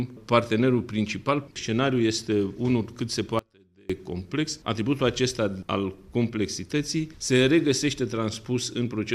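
An audio dropout to a faint residue runs from 3.39 s to 3.90 s, about half a second in which the sound cuts out abruptly rather than pausing or fading. What remains in the gap is a faint trace of the sound itself, roughly 30 dB below its normal level, before it snaps back mid-flow. That behaviour likely comes from a momentary break upstream while the later stages stayed live, letting only a weak leak through.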